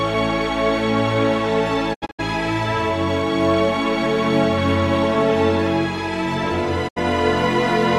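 The audio has two digital broadcast dropouts, where the receiver muted on corrupt or missing frames. From 1.93 to 2.21 s it breaks into several short holes spread over 240 ms, totalling 168 ms of silence, the longest run 72 ms. At 6.87 s a single 72 ms gap follows. Each mute fades in about 20 ms and leaves pure silence, not the smeared or repeated sound of packet-loss concealment, and the lost material is skipped rather than spliced out.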